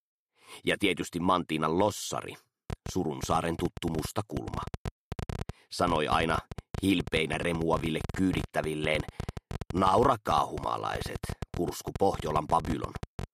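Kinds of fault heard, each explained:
Train of clicks: From 2.7 s to 13.24 s, a run of similar sharp pulses, about 150 in all and averaging 11.7 per second at uneven spacing, ticks over the audio and through pauses, peaking roughly 10 dB above it, likely interference or a faulty connection.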